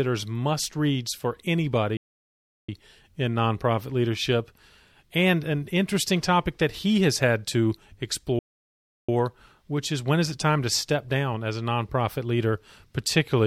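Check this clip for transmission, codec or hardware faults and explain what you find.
Two playback stalls in this speech. The first runs from 1.97 to 2.69 s, right after "must reads for", with speech resuming at "in nonprofit leadership". The second runs from 8.39 to 9.09 s, ending just before "which is when is". Each is about 0.7 s of dead silence mid-flow, likely the player starving for data or its thread getting blocked.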